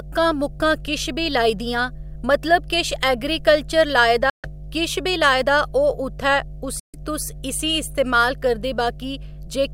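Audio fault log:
throughout, mains hum: There's a steady 50 Hz drone sitting under the speech the whole way through, and it's fairly prominent, roughly 15 dB below the talker. You'll catch a few low harmonics riding on it too. That's the power line leaking into the signal, most often through a ground loop between connected gear or from a transformer sitting close to a cable or input.
4.30–4.49 s and 6.79–6.96 s, Bluetooth dropout: The audio cuts out twice, once right after "किश ऐगरीकल्चर लाए दा" and picking up at "किश बी लाए दा", then again after "लाए दा ओह् उत्थै" until "तुस इसी इस्तेमाल". Each gap lasts just under a fifth of a second. When it comes back, the speech has moved on rather than resuming where it stopped. That points to packets likely missing their slot over the wireless link. Each hole fits something like nine lost frames.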